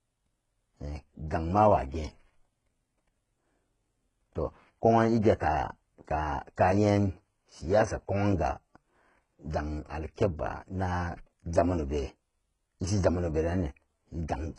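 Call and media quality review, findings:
Gritty, lispy sibilants and a synthetic-sounding top end across the whole clip, heavy damage. Nothing above 11 kHz. Likely HE-AAC compression, v2 flavour: core codes only the low band, treble rebuilt by spectral band replication from copied lower bands, so harmonics don't line up across the crossover. Sound points to a very low bitrate, roughly 12 kbps territory. Worth checking the encoder profile on this path.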